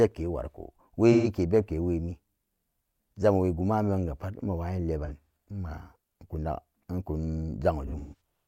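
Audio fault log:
1.12–1.28 s: AAC frame loss with concealment; about 128 ms of audio is missing, which fits three lost frames. The decoder rebuilds them from the last good spectrum, so the sound turns smeared and noisy.
5.05–5.31 s: AAC frame loss with concealment; 128 ms is lost across a 341 ms stretch in short gaps of around 40 ms, giving brief phasey patches.
7.86–8.21 s: AAC frame loss with concealment; 213 ms is lost, including one run of about 150 ms, long enough that the concealed sound decays toward silence before fading back in.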